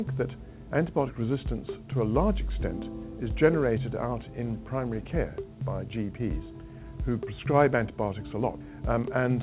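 No technical fault can be heard anywhere in this audio. It has passed through a WebRTC call path, and the sound stops at about 4 kHz, which fits a narrowband telephone codec such as G.711 mu-law at 64 kbps.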